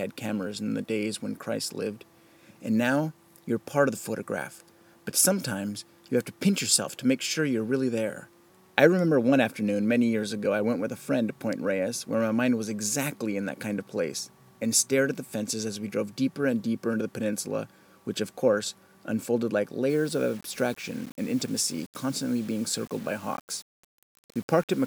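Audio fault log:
19.90–24.87 s, low bit depth without dither: in the final stretch the sound turns grainy, with a rough distortion that rises and falls with the level, roughly 25 dB below the signal. The likely cause is samples rounded to a coarse grid, which fits 8-bit resolution, with no dither added, so the rounding error tracks the waveform instead of spreading as steady hiss. Quiet passages grow gritty and the faintest parts sputter or drop out.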